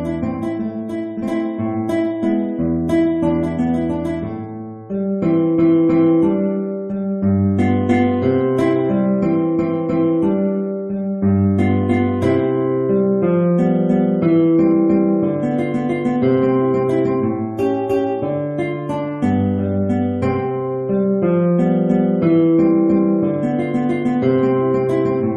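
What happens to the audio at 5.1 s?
Nothing goes wrong at 5.1 s; the audio runs through that moment intact, with no audible fault.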